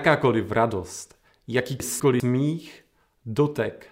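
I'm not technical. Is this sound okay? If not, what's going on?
No. Between 1.8 and 2.2 seconds the speech briefly jumbles because of chunks out of order: a 200 ms piece arrived one chunk late and plays after the piece meant to follow it. Unlike a dropout, nothing is missing; it's only shuffled.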